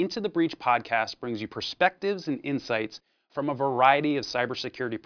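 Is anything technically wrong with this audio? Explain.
No, nothing stood out as technically wrong when listening to this audio.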